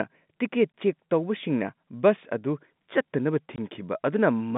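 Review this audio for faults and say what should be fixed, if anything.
Packet loss filled with silence occurs at 0.72 s and from 3.56 to 3.58 s. Each hole is about 20 ms, which fits one lost packet replaced by silence. On the waveform it appears as a flat gap with abrupt edges, and on the spectrogram as a blank vertical stripe. Adding jitter buffering and packet loss concealment at the receiver, alongside the G.711 telephone band, would prevent these holes.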